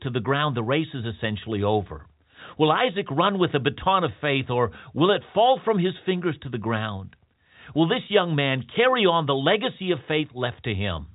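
No faults are audible in this speech: it is band-limited to telephone quality by its G.711 telephone coding, with nothing above about 3.8 kHz and only faint coding grain that follows the level.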